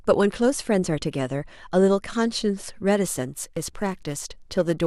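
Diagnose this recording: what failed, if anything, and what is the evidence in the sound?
Periodic clock jitter in the converter from 3.04 s onward: its sampling clock wobbles near 1 kHz, so a spectrogram shows sidebands that far either side of each component.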